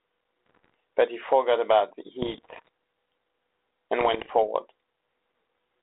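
Bit errors on an ADPCM link hit at 0.46 to 0.74 s, 2.22 to 2.68 s and 3.99 to 4.44 s, with roughly 0.7, 1 and 0.7 percent of bits flipped. Each error throws off the decoder's step size and prediction, so pops ring into rough bursts with brief level jumps, unlike the clean gaps of packet loss.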